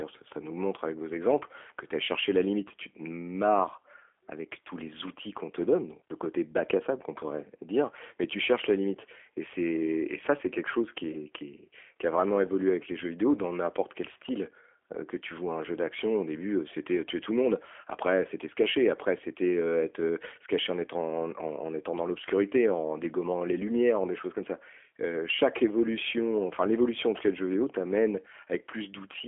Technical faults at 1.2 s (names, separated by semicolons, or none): G.729 codec